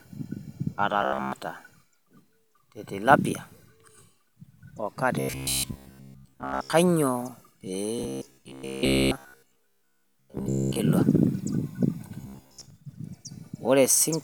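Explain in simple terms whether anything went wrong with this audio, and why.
The speech turns into a stiff, metallic buzz from 1.02 to 1.32 s, 5.2 to 6.73 s, 7.99 to 10.81 s and 12.21 to 12.7 s. The sound follows the original only roughly, and a fixed hum of about 67 Hz sits on it. This is robotic sound from repeated short buffers. New audio likely arrived too slowly, so the player kept repeating the last 15 ms or so in place of most of the real sound, and that steady repetition creates the buzz.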